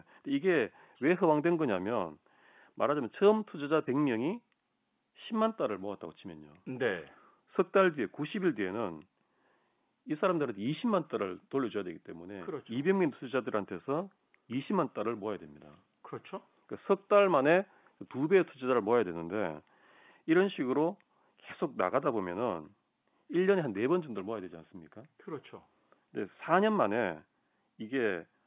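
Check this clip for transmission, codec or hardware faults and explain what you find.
No transmission, codec or hardware faults turn up anywhere in the speech. What can be heard is the ordinary G.711 telephone coding at an 8 kHz sample rate, with the narrow band that stops at 4 kHz and the faint hiss that rises and falls with the speech level.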